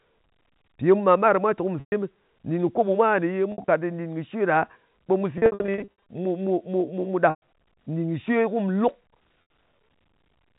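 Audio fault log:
1.80–1.92 s, packet loss with pitch repetition: a 120 ms gap is filled by looping the last pitch period, heard as a held, buzzy tone that fades before the sound resumes through a short cross-fade.
3.52–3.68 s, packet loss with pitch repetition: 100 ms lost in short scattered runs of up to 60 ms, giving brief buzzy holds.
5.38–5.88 s, packet loss with pitch repetition: repeated runs of up to 60 ms, 400 ms in total, produce a stuttering, droning stretch.
7.30–7.38 s, packet loss with pitch repetition: a 120 ms held buzz that fades out.
9.42–9.50 s, packet loss with pitch repetition: an 80 ms held buzz, bandlimited like the rest of the audio by the G.711 telephone coding, which adds at most a faint quantisation noise of its own.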